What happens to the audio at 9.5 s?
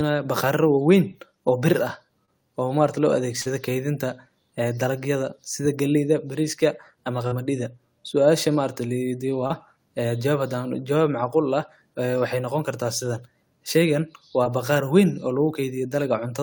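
A brief smear lands between 9.47 and 9.52 s: for a moment the speech blurs into a wobble before blending back. This is short concealed packet loss. Roughly 20 ms of the call arrived too late for the decoder, so the receiver bridged the gap by extending the preceding sound, following its pitch where it was voiced and substituting shaped noise where it was not, then crossfaded back into the real signal.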